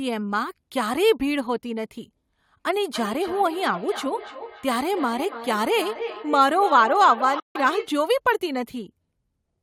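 Speech recording with two faults. Feedback echo between two devices runs from 2.75 to 7.95 s: a second device replays this microphone's sound, which is picked up again and returns roughly every 300 ms, peaking at about 11 dB below the speech. From 7.40 to 7.57 s, overlapping the echo, a sharp-edged silence of about 150 ms then resumes further on, likely a Bluetooth dropout where late packets were discarded.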